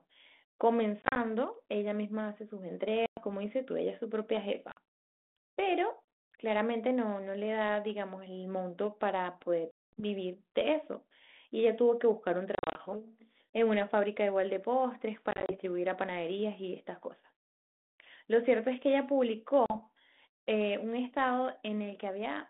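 Packet loss on an ADPCM call breaks the speech seven times, at 1.02, 3.06, 4.72, 9.71, 12.55, 15.31 and 19.66 s. Each is a hard-edged hole of silence. The longest, at 9.71 s, drops about 220 ms. At 1.02, 12.55 and 15.31 s the gaps come as short scattered runs. After each hole, the decoder's predictor and step size no longer match the sender's. Speech returns with brief, slight distortion.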